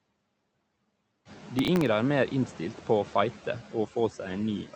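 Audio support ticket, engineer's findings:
Noise suppressor artifacts, throughout. Background noise drops by about 18 dB in pauses, then swells back under speech. Suppressor gating per frame, cutting bands it judges steady noise.

Worse after room noise rises about 12 dB around 1.5 s. Heavier noise forces deeper band cuts, so the artifacts are more audible. Underlying room noise is part of the recording, not a fault.

Processor overload crackle, 1.59 to 1.86 s. Gritty tearing burst riding on the speech, stopping cleanly. Audio thread missing several deadlines in a row.

Each missed buffer repeats a sliver of stale audio with hard edges. The sliver length suggests sub-millisecond buffers. A run of repeats fuses into crackle. Check CPU load or scheduling at that point. The Opus call path, band-limited to 8 kHz, is not implicated.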